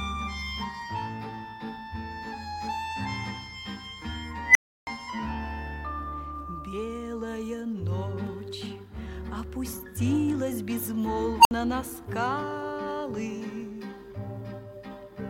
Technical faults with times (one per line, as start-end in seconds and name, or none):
4.46-4.87 unstable filter
11.40-11.51 unstable filter